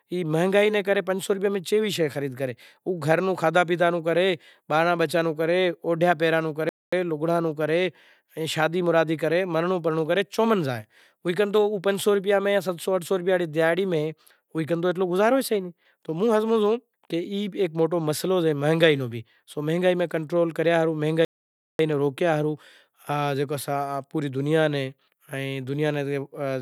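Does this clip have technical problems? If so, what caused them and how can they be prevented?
Yes. The player likely ran short of buffered data, or its thread was held up, producing a playback stall: the speech falls silent mid-flow from 6.69 to 6.93 s (about 0.23 s) and from 21.25 to 21.79 s (about 0.54 s), resuming at "ناں روکیا". Prevent it with a larger playback buffer and a high-priority audio thread that nothing else can block.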